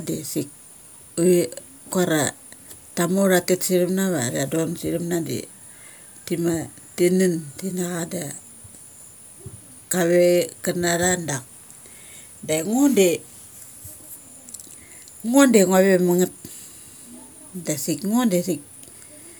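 Nothing goes wrong anywhere in this speech recording, so there's no fault to point to at any moment.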